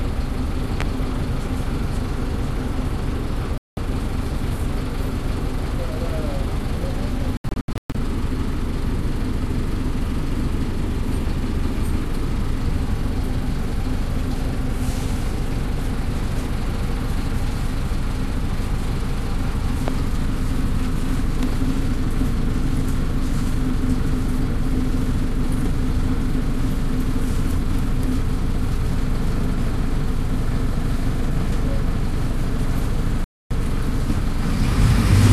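A recording of everyday sounds, interrupted by two loud pops and three digital broadcast dropouts. The pops are most likely voltage pulses from a plug, switch, static or driver glitch added to the signal. Each lands as a single sharp pop on top of the sound, which carries on underneath: one at 0.81 to 0.84 s, peaking about 15 dB above the surrounding sound, and one at 19.88 to 19.91 s, about 10 dB above it. The dropouts come from the receiver losing the digital signal or rejecting corrupted frames and muting until clean frames returned, so the sound cuts out and whatever was sent during the gap is gone. At 3.58 to 3.78 s about 192 ms is missing. At 7.37 to 7.95 s about 360 ms of sound is lost in several short holes spread over 576 ms, the longest lasting 120 ms. At 33.24 to 33.51 s about 264 ms is lost. These lengths fit a stream carried in frames of roughly 24 ms.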